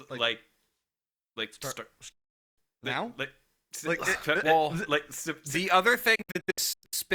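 At 2.12 s, just after "like start start", a digital broadcast dropout fades the speech to silence in 8 ms and it returns at 2.58 s with "now like like it". From 6.15 to 6.94 s, scattered short mutes, the longest 96 ms, drop about 416 ms in total. On a spectrogram or waveform, each appears as a blank vertical gap.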